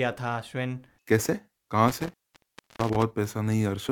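From 1.88 to 3.03 s the speech is hit by an intermittent contact: a loose plug or cable opening and closing, leaving about 0.66 s of signal gone. Unlike a clean digital dropout, the breaks carry crackle at their edges and faint hiss underneath.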